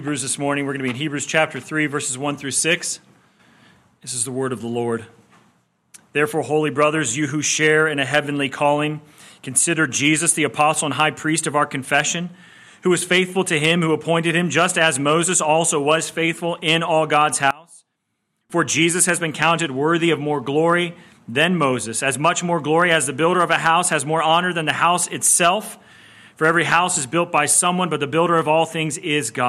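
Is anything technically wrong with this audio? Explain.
Yes. From 17.51 to 18.50 s the sound collapses to a faint remnant, roughly 24 dB down, with anything centred almost gone. The likely cause is one channel inverted: with one side's polarity flipped, the material shared by both channels cancels when they are combined, leaving only their differences. Unlike a dropout or a gain dip, it isn't silence or a uniform drop. A faint residue remains.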